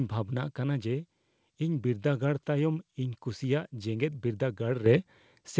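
At 4.86 s the speech and background jump up together by about 8 dB: microphone volume stepped up, software raising the input gain in one step, over a band ending near 8 kHz.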